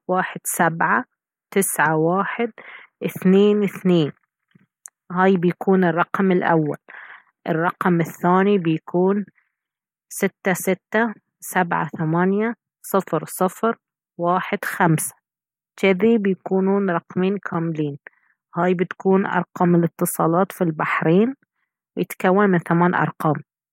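No technical faults are audible anywhere in the recording.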